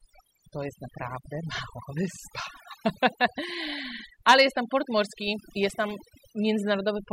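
From start to finish the pauses between phrases fall to near silence scattered with twinkling specks. This is overdone noise removal: a noise reduction process applied far too strongly, pulling individual frequency bands down or shutting them off whenever their level came close to its noise estimate. The quieter parts of the voice were caught in that net and removed along with the noise.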